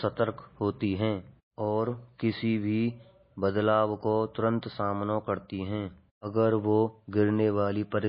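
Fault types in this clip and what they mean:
MP3 compression: the speech is likely MP3-coded at a low bitrate, roughly 24 kbps by the sound, with nothing above about 5.3 kHz and plainly audible damage throughout: a watery, swirling texture as weak frequency components drop in and out between frames, and dulled, smeared consonant attacks.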